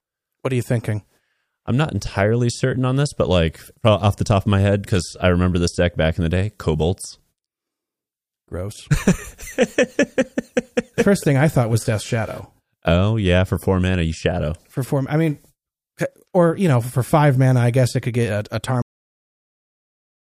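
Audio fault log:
18.82 to 20.39 s, cut-off end: right after "could get a a" the speech just stops dead at 18.82 s, mid-sound, and the last stretch of about 1.6 s is flat digital silence. There's no tail or natural decay at all; it goes straight from signal to nothing. That points to the final buffers never being written out or played, so the recording simply ends wherever the data ran out rather than where the talker finished.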